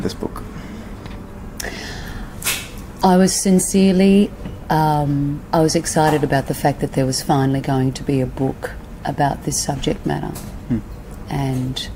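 No technical faults can be heard anywhere in this audio.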